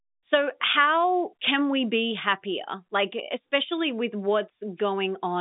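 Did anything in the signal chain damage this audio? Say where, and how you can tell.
No, nothing in the chain has damaged it; it's just speech carried over G.711 telephone coding, so the band sits at about 150 Hz to 3.7 kHz with nothing above 3.8 kHz, which is simply how a phone line sounds.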